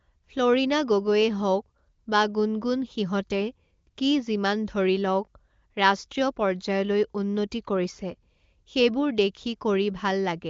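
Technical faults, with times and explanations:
The speech has passed through the AMR wideband (HD Voice) codec, with its band ending near 7.4 kHz and little trace of the coding beyond that, which fits the codec's high rate of 23.05 kbit/s.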